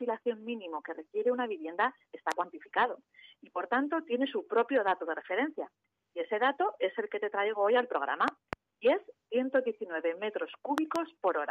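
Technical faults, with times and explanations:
2.32–2.34 s, 8.28–8.55 s and 10.78–10.98 s, loud pop: a single sharp pop first, then a pair of pops in quick succession at each later time, each peaking about 20 dB above the surrounding sound. A sudden voltage step or pulse, likely from a plug, switch, static discharge or driver glitch, was added to the signal and shaped by later circuitry. Unlike a dropout, the sound carries on underneath without a gap.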